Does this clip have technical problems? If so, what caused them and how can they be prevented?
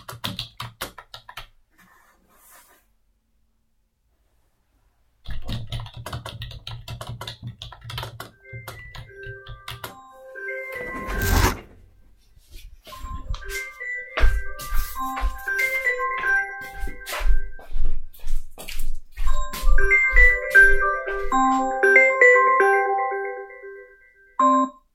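No, there are no technical problems to report here.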